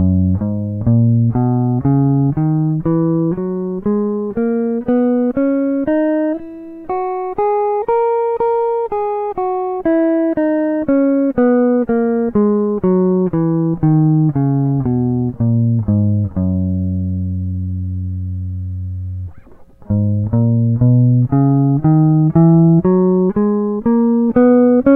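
No technical faults are audible.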